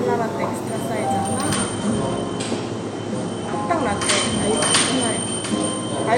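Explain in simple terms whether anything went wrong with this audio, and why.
Something did go wrong. From about 1.54 s to the end, this is an adaptive stream at a lower bitrate: the connection slowed, so playback jumped without any gap to a cheaper version. The sound turns duller, with nothing above about 11.3 kHz, and grainier.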